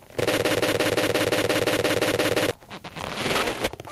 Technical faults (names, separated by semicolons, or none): gain pumping; broken-record loop